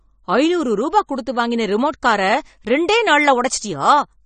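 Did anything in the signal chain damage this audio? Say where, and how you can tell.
Yes. The damage is at the codec stage and lasts the whole speech clip. Nothing sounds above 9 kHz. The sound is dull and smeared, with fizzy sibilants. The likely cause is AAC compression, AAC-LC at a low bitrate around 32 kbps, which cuts the top band.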